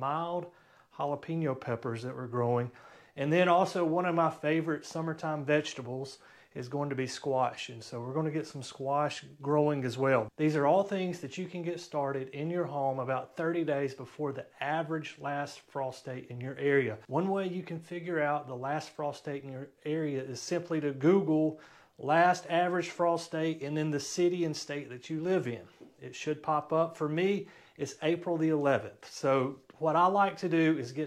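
No technical faults can be heard anywhere in the recording. Nothing breaks up or drops out at any point.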